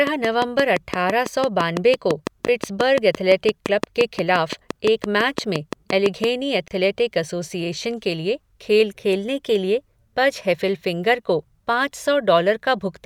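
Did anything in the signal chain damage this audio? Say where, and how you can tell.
Yes. From 0.07 to 6.25 s, a train of clicks ticks over the speech at a steady 5.85 per second, roughly forty in all, and they stand well above the speech level. Each click has much the same shape, and they continue through the pauses. That points away from codec or buffer faults, which track the signal or break it. The likely source is interference coupling into the analogue wiring.

A gap at a join of encoded pieces opens twice: a 13 ms silence at 2.47 s, and a 30 ms one from 6.68 to 6.71 s, just before "एसोसिएशन के लिए खेल". The codec smears the edges, and the speech resumes exactly where it stopped. That places the fault at the codec or storage stage, where separately encoded segments were concatenated with their padding left in. Nothing is skipped, which separates this from a network dropout.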